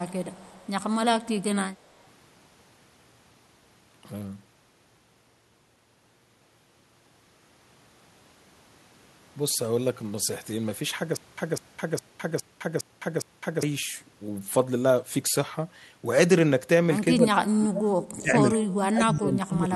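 From 0.08 to 0.7 s, and again briefly at 1.99 s, a faint delayed copy of the speech trails the original by 186 ms: an echo leak, likely from a far-end loudspeaker whose echo canceller let some of its microphone pickup through. It sits about 30 dB below the speech at first and about 40 dB below in the second scrap. Unlike room reverberation, which smears the sound continuously, this is a discrete repeat at one fixed delay that appears only in patches.

Between 11.17 and 13.63 s comes a stutter with silent gaps, likely a stalled player or stream retrying. The same fragment of about 0.2 s plays six times, each followed by about 0.21 s of digital silence, so it recurs every 0.41 s. The speech that should have filled that stretch is lost. A packet-loss concealment repeat would fill the gaps with a fading copy, but here the gaps are truly empty and the pace is strictly even.

From 17.12 to 17.98 s and from 18.21 to 19.72 s, the speech is suppressed in double talk: likely both sides talked at once, and the echo canceller, unable to separate this talker from the loudspeaker echo, turned the speech down. 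The level drops by as much as about 30 dB, across roughly 0.7 s in the first stretch and about a second in the second. The dips follow the overlap with the other side rather than a steady gate, which is what separates this from a noise suppressor clamping down.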